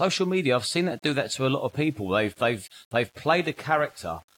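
Throughout the speech, grainy distortion tracks the signal, roughly 35 dB down. That is likely low bit depth without dither, consistent with 8-bit rounding.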